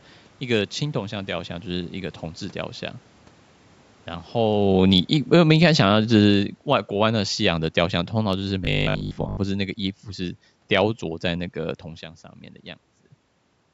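Automatic gain falling, 4.34 to 9.70 s: the gain control judged the input too loud and eased its gain down by about 11 dB over those five seconds. Speech and room noise sink together. Near 4.5 s the talker also shifts position, which is separate from the gain drop.

Automatic gain rising, 5.78 to 6.23 s: inside that long fall, the control briefly reverses and lifts its gain by about 3 dB. Voice and background swell together for under half a second before the downward drift resumes.

Robotic sound from repeated short buffers, 8.65 to 9.39 s: the speech turns into a rigid, metallic buzz at 50 Hz that still loosely tracks the syllables. Most of this stretch is repeated rather than real audio. The likely cause is that new audio arrived too seldom, so a 20 ms chunk was replayed over and over. Its repetition rate sets that fixed pitch.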